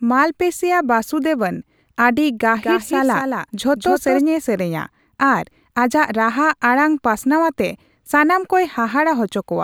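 From 2.57 to 4.21 s, a doubled audio track appears. A full-band copy of the speech trails about 200 ms behind, roughly 5 dB quieter. It has no decay or room colour. It starts and stops abruptly. Likely cause: a second, slower capture path.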